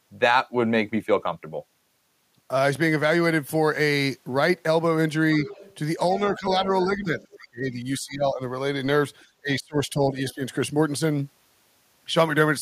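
An echo canceller likely failed to strip the loudspeaker's playback from the microphone, so the other side's voice leaks through from 5.46 to 5.75 s and again from 6.15 to 6.2 s. These are faint scraps roughly 15 dB under the speech. Both sides then talk at once, and the canceller likely can't tell its own talker from the echo, so speech is suppressed in double talk from 6.27 to 7.2 s. The voice dips by around 10 dB. A much fainter leak follows from 7.19 to 7.36 s, well down at roughly 25 dB below. Deeper suppression then pulls the speech down by about 20 dB from 7.38 to 8.42 s and by about 25 dB from 9.4 to 10.41 s.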